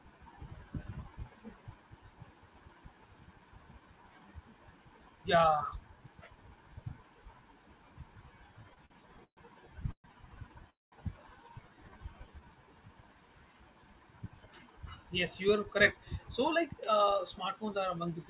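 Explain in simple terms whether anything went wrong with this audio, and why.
Several things went wrong, all from about the middle of the clip onward, and all come from delivery over a call connection.

From 8.63 to 9.40 s the speech catches and judders, like a skipping record. This is repeated stalls (stutter). Chunks of audio kept arriving late, so the receiving end ran out of sound six times in under a second. Each time it stretched the last bit of sound to cover the wait, the longest wait being about 131 ms. Nothing is lost, but the speech drags.

At 9.91 s, and again at 10.70 s, the sound briefly buzzes and then goes quiet. The first lasts about 130 ms and the second about 220 ms, most of each being silence. These are call audio freezes, likely caused by packets being held up in transit. The receiver faded out the last sound while it waited, then carried on where it stopped. A pause was inserted, but no speech was dropped.

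From 11.74 to 12.46 s the speech sounds drawn out and sluggish, though the pitch stays the same. This is a jitter buffer slow-down. Its store of audio had run low, so the receiver repeated tiny slices of the speech to rebuild a reserve. It added about 86 ms, which made the speech play at about 89% of normal speed.

From 14.22 to 17.04 s, and again from 17.56 to 18.27 s, the speech sounds a little rushed, again with the pitch unchanged. This is a jitter buffer speed-up. After the delays, audio had piled up, so the receiver trimmed out tiny slices to catch up. The first stretch runs at about 106% speed and loses roughly 150 ms. The second runs at about 107% and loses around 50 ms.

Throughout the clip the call link carries no sound above 4 kHz, which gives it the familiar narrow telephone tone.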